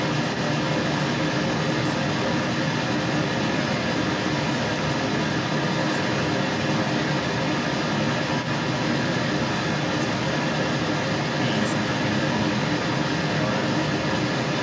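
From the start to the end at 14.6 s, a second voice runs alongside the main speech: the other side's voice leaking through, sitting around 10 dB above the near talker. The likely cause is a loudspeaker on the talker's device feeding the far end back into the microphone, with the echo canceller failing to strip it out. On a spectrogram, a second set of harmonic stripes overlaps the main ones throughout, all cut off at 8 kHz by the call's processing.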